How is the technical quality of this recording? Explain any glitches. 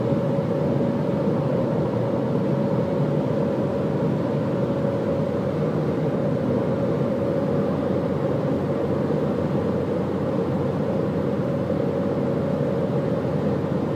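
The technical quality of this recording shows no glitches to explain.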